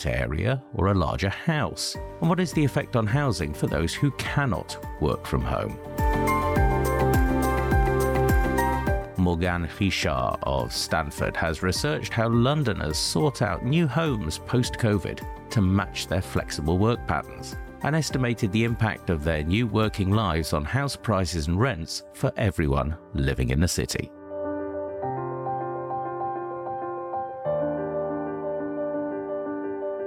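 A train of clicks runs from 7.02 to 10.82 s: around twenty similar pulses at about 5.3 per second, irregularly spaced and roughly as loud as the sound itself, likely from nearby equipment interference. Unlike random crackle, the clicks repeat with a consistent shape.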